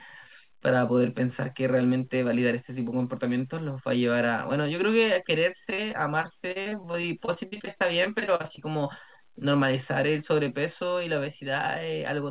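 Speech that turns choppy and robotic from 5.7 to 8.64 s, where repeated packet loss leaves 28 short holes, none longer than 41 ms, each patched by extending the last sound. The speech is band-limited to 4 kHz, which points to a G.711 mu-law call path at 64 kbps.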